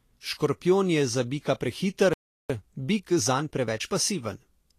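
A short speech recording carries plainly audible codec damage from start to finish, most likely from Vorbis compression at a low setting, in the region that fits a bitrate of about 35 kbps. Nothing is present above 14.2 kHz, so the treble above that point is simply absent. Below that cut-off the treble has been quantised so coarsely that fine detail is replaced by noise of similar energy, giving a hissy, grainy texture and softening consonant attacks. At 2.13 s the sound stops in mid-flow and stays silent until 2.50 s, a gap of about 0.36 s. This is a playback stall, likely caused by the player's buffer running dry or its output thread being held up, so nothing reached the output until it recovered. From 2.50 s to 3.94 s the playback runs fast at 1.25 times normal speed while the pitch stays where it should be. This is time-compressed catch-up: to recover the delay the stall built up, small segments are trimmed out and the joins cross-faded. 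That shortening leaves the passage sounding hurried.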